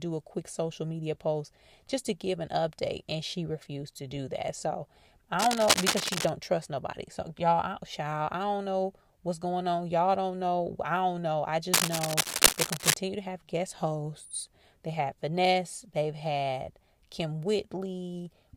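A worn cable or connector, likely shifting in its contact, causes cable scratch noise in this speech clip: rough scratching bursts from 5.39 to 6.29 s, about as loud as the speech, before "trust nobody", and from 11.72 to 12.94 s, about 5 dB louder than the speech, between "I don't know I" and "to have guest hosts".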